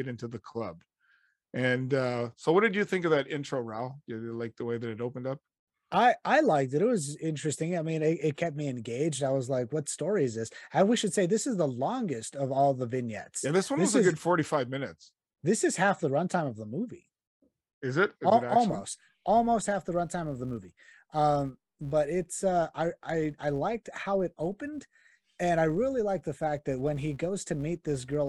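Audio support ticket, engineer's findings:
Buzz at 200 Hz, 18.69 s to end. Filter restarted on every block: state lost, one transient per 5 ms block. Follows speech level, unlike steady mains hum.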